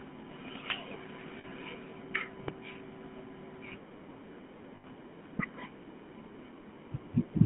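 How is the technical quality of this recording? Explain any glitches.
The recording is poor: the whole speech clip passes through a GSM full-rate codec, with two bursts of lost GSM frames and two loud pops.

GSM full-rate codec, throughout: pulse-excited vocal-tract modelling, fitting 13 kbps, gives buzzy, gravelly speech. A spectrogram shows energy confined to 150 Hz–3.4 kHz, empty above.

Lost GSM frames at 1.38–1.45 s (60 ms) and 4.76–4.85 s (80 ms): the last good frame is repeated with falling level, producing a metallic ring. On a spectrogram, the frozen, smeared harmonics fade out.

Loud pop at 2.48–2.51 s and 5.39–5.42 s: a sharp click about 15 dB above the speech, likely a voltage spike from a switch or static. The waveform shows a tall spike. The spectrogram shows a thin vertical broadband line.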